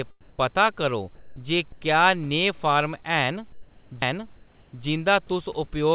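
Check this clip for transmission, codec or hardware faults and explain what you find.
Three kinds of fault are audible in this speech clip.

Sound dropped by the voice detector, 1.15 to 1.36 s and 1.72 to 1.81 s, just before "जे क्या नेहे फार्म" and "क्या नेहे फार्म". Quiet speech was likely judged as background, so sending stopped and steady noise briefly replaced it.

Comfort noise in place of the background, 3.52 to 3.91 s. During a pause, transmission likely halted and the receiver substituted a smoother synthetic noise, about 1 dB quieter than the real room noise.

CD skip at 4.02 s, right after "जे क्या नेहे फार्म". The pickup jumped tracks, giving a tick, a mute of a few milliseconds, and an abrupt jump in the sound.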